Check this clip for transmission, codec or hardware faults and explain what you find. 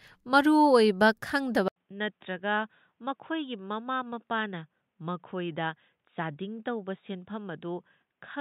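One fault is present. At 1.68 s the speech cuts out for 80 ms. From there to the end, nothing above 3.8 kHz remains. The level drops by about 10 dB, and a new, faint noise floor appears well below the speech. The likely cause is an input switched to a poorer device, such as a headset's call profile. That narrower path strips the upper band. The speech turns dull and boxy, and quieter, and never recovers.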